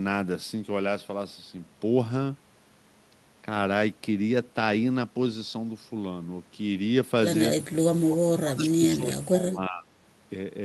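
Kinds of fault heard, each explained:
Speech suppressed in double talk: between 8.1 and 9.9 s the speech level drops in pieces, by around 25 dB at worst, for about one and a half seconds in total. Likely an echo canceller turning down near-end speech it could not separate from loudspeaker echo.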